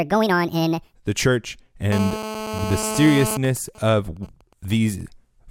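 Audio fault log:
0.00–0.94 s, section at the wrong speed: audio before "the church" runs 1.59 times fast, raising pitch about seven semitones; likely a playback clock mismatch.
1.92–3.37 s, GSM phone buzz: after "the church", a nearby 2G phone in a call pulses at 216.7 Hz; rectified bursts give a raspy harmonic buzz about 7 dB below the speech.
3.45–5.01 s, GSM signalling bursts: the phone, in a call with its user silent, sends sparse burst groups, heard as even ticks with a longer 216.7 Hz buzz twice a second, about 25 dB down.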